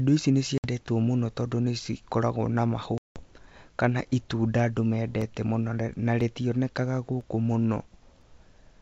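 Packet loss on an ADPCM call hits at 0.58–0.67 s, just after "ici nĩ", and again at 2.98–3.21 s, after "tondũ nĩ cikoragwo na". Silence replaces about 60 ms and then 180 ms, and the decoder's predictor and step size lose sync, so the speech resumes slightly distorted.

Periodic USB or driver dropouts follow from 5.21 s to 8.22 s, once every 1.0 s, about four in all. Each blanks roughly 2 ms to silence, producing regular small ticks.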